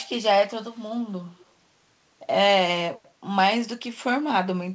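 From 0.72 to 0.84 s, an echo leak: a faint copy of the speech trails it by 172 ms, about 40 dB down, likely loudspeaker pickup the echo canceller missed. A spectrogram shows a dim, right-shifted repeat of the harmonics; the waveform barely changes.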